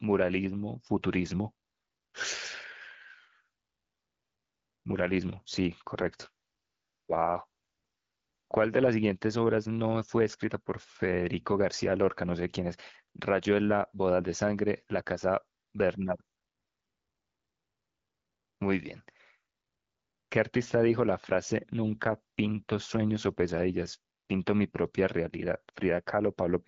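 An AMR rate drop happens twice, from 5.96 to 8.90 s and from 21.88 to 23.52 s: the link forces the wideband codec down, which fits a step from 12.65 to 8.85 kbit/s. Without a gap or band change, the speech turns rougher and more synthetic until the rate recovers.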